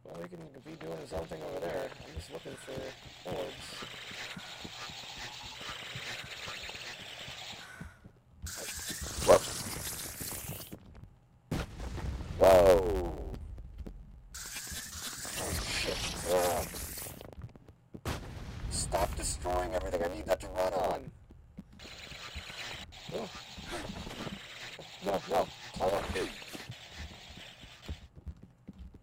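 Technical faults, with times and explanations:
throughout: block size mismatch (truncated). Each block's tail is dropped, which fits 512-sample writes, so sound runs 1.07x fast with its timbre kept under a 91.9 Hz buzz. Spectrogram shows evenly spaced vertical seams.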